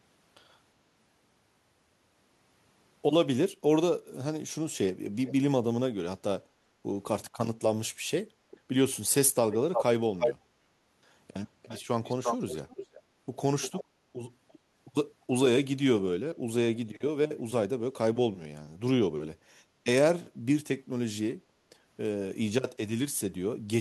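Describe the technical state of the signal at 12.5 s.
At 12.5 s there is an echo leak, spanning 12.04 to 13.0 s. A copy of the speech returns 0.35 s late and only slightly quieter, likely slipping past a loudspeaker-side echo canceller. Spectrograms show harmonic patterns repeated 0.35 s later, and the waveform shows doubled envelopes.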